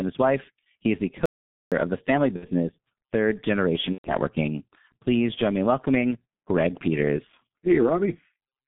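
Throughout, the speech has passed through the G.723.1 codec at about 6.3 kbit/s, within a 150 Hz to 3.6 kHz line band, leaving it heavily muffled and hoarse, with smeared consonants. From 1.26 to 1.72 s, after "wife he is the", there is an audio dropout to silence, likely a lost input; the 461 ms gap has no room tone, and speech resumes at "of the family". After that phrase, VoIP packet loss concealed by the speech codec appears at 2.36 to 2.50 s. The decoder extrapolates across roughly 60 ms, which fits two lost 30 ms frames, stretching the sound into a fading buzzy tone or coloured noise. At 3.93 to 4.12 s, about 120 ms is lost, which suggests four frames. The concealed sound is muted from the third frame, and the speech stays weak for a short while after it returns.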